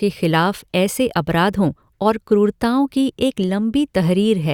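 The speech recording shows no technical fault that a listener can detect anywhere in its duration.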